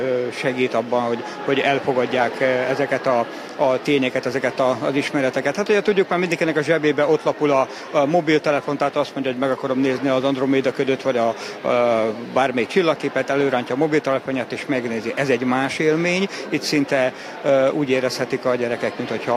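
No technical faults are audible.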